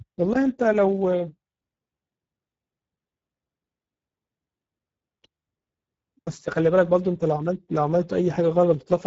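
From start to finish the speech sounds hoarse and grainy, with a plainly audible buzzy roughness and nothing above about 7.7 kHz. This is Speex codec damage: the CELP coder, running at a rate that fits roughly 10 kbps, has too few bits to rebuild the excitation cleanly.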